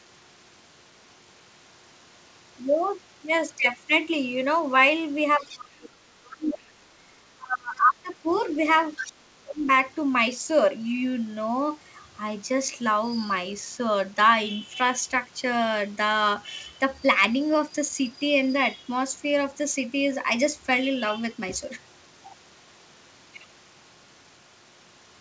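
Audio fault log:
5.37 to 9.68 s, speech suppressed in double talk: With both sides likely talking at once, the echo canceller could not separate the near talker from loudspeaker echo, so it turned everything down together. The talker dips sharply at 5.37 to 6.02 s, 6.34 to 6.74 s, 7.33 to 8.28 s and 9.08 to 9.68 s. Each drop reaches about 25 to 30 dB and lasts from under half a second to about a second, so the voice fades or breaks off in pieces.
5.40 to 9.12 s, other side's voice leaking through: The far side plays from a loudspeaker into the microphone, and the canceller, likely overwhelmed during the same overlap, fails to strip all of it out. Brief scraps of a second voice surface at 5.40 to 5.57 s (about 20 dB below the talker), 6.25 to 6.31 s and 8.31 to 8.44 s (both about 30 dB below), and 8.96 to 9.12 s (about 10 dB below, the most audible). Like the rest of the audio, they stop near 8 kHz, which fits a wideband call codec such as G.722.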